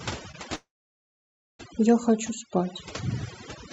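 From the start, overdone noise removal is at work across the whole clip: the suppressor is set so hard that frequency bands near its noise estimate get pulled way down or switched off, taking quieter parts of the speech with them. The background drops and breaks up into little twinkling specks.

Around 0.31 to 0.35 s there's a short concealed packet loss, roughly 20 ms of audio that didn't make it to the decoder in time. The receiver patched the gap by extending what came just before, then blended back in, so you hear a brief smear or wobble there.

Then from about 0.55 s to 1.61 s the sound drops out for over a second, most likely a long network dropout. The receiver stretches the last sound briefly and lets it fade, and after that you get about 0.94 s of silence before the audio picks up again further along, with that stretch simply gone. The top end stops at around 8 kHz throughout, which fits a call codec running in wideband mode.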